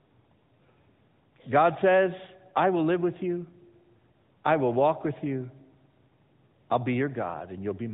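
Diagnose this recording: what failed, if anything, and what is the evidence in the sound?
The codec stage failed: AMR narrowband mobile codec damage runs through the whole speech clip. Nothing passes above 4 kHz, and the voice sounds plainly buzzy and synthetic, which fits a mid-rate mode near 10 kbps, where the pulse-driven vocal-tract model audibly replaces the natural waveform.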